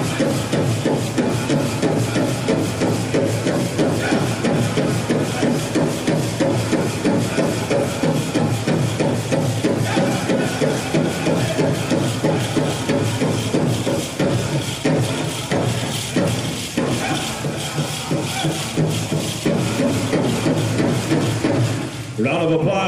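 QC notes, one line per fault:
16.26 s, compressed frames skipped: the audio jumps ahead about 50 ms, fitting two 23.2 ms frames, leaving a sudden jump at the join rather than a silent gap.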